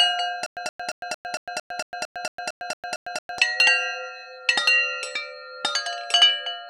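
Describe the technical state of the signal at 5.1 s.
A doubled audio track is present at 5.1 s, as it is throughout the clip. A second, full-band copy of the sound runs about a second behind the first and at roughly the same loudness, so each event at 5.1 s is heard layered over whatever occurred about a second earlier. The copy is clean, with no decay or room colour, unlike a natural echo. It is likely caused by a second, slower capture path or an edit holding two offset copies.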